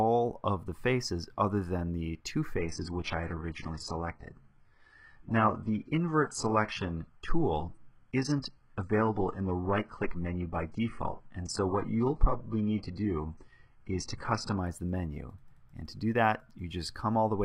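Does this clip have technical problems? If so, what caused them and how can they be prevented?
Yes. From 2.58 s to 14.58 s, an adaptive stream drops to a lower bitrate for 12 seconds. The switch is abrupt in both directions, with no gap. During that stretch nothing remains above 11.1 kHz, and the top end turns thin. Codec artefacts rise. The sound points to a move from a high-quality AAC stream to a very low-rate HE-AAC rendition after the connection slowed. A steadier connection, a larger playback buffer or a higher minimum bitrate prevents it.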